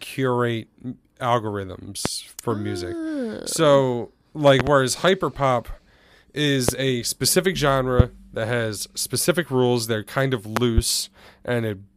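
A voltage spike, likely from a switch or static, adds loud pops about 20 dB above the speech at 2.06, 6.69 and 8.00 s, with double pops at 4.60 and 10.57 s.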